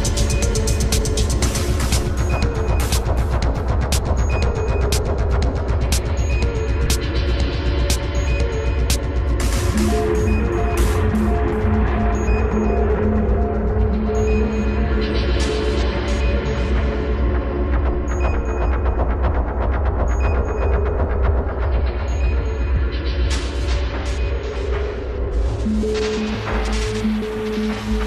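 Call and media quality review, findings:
Compressed frames skipped, twice. At 6.85 s, a short smeared blip where audio jumps ahead roughly one frame, around 20 ms lost. At 15.82 to 15.84 s, same thing but bigger, about three frames, around 70 ms gone. Frames look like 23.2 ms each. Decoder is dropping whole frames, either missing from the file or rejected as corrupt. Overlap between neighbouring frames smooths the joins, so you get smear rather than hard clicks.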